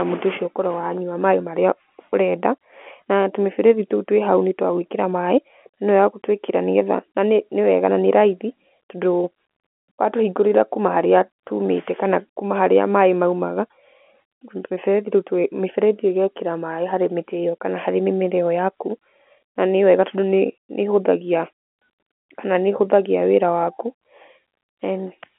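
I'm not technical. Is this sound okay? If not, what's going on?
Yes, nothing is wrong here.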